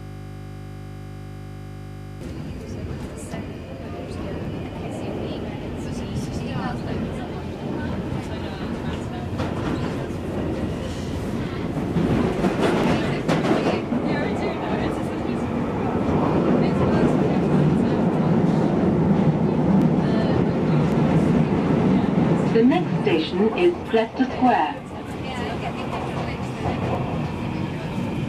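Right from the first instant the clip is already caught in a system hang loop, and it stays stuck until about 2.21 s. Something froze upstream while the audio hardware kept replaying the same 20 ms chunk of its ring buffer, over and over, about 110 times. Because the looped piece is so short, you don't hear a stutter. It fuses into a steady buzz at 50 Hz, the repeat rate, until the stream breaks free.

After that there are five isolated sharp clicks, at 4.45, 12.84, 19.82, 20.92 and 26.95 s. Each is a single tick, a thin vertical line if you look at the spectrum, with nothing audibly missing around it. The likely cause is dropped samples: a tiny gap, about 0.7 ms, where the waveform jumps abruptly from one value to a later one instead of flowing smoothly.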